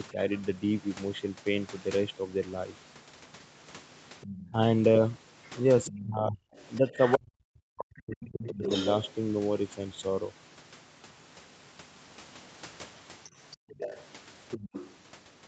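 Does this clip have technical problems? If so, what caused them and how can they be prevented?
Yes. Speech suppressed in double talk occurs at 0.13–0.18 s (a drop of about 5 dB), 4.51–4.56 s (about 10 dB) and 5.89–8.63 s. In the last stretch the speech sinks by as much as about 40 dB for roughly two seconds. The likely cause is an echo canceller that couldn't tell the near talker from loudspeaker echo while both sides spoke, so it pulled everything down. A canceller with better double-talk detection, or a headset, would prevent it.

The other side's voice is leaking through at 4.21–4.5 s (about 20 dB below the speech), 5.43–7.13 s (about 15 dB below), 7.97–9.1 s (about 10 dB below) and 13.51–14.96 s (about 15 dB below). This is likely residual loudspeaker echo that the canceller failed to remove from the microphone. Headphones, lower speaker volume or a better-tuned echo canceller would keep it out.

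Background gated by the echo canceller occurs at 13.57–13.71 s, where the room sound falls by about 40 dB for roughly 150 ms. The canceller clamped the microphone hard while the loudspeaker played, then released it. Gentler suppression settings, or keeping loudspeaker audio out of the microphone, would prevent this gap.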